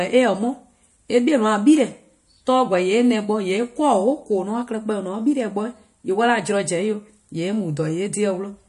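MP3 compression artefacts run throughout the speech, most likely from encoding at a low bitrate, which fits around 48 kbps. Short of bits, the encoder drops weak frequency lines frame by frame, leaving a watery, swirling texture, metallic chirps on s sounds and smeared onsets.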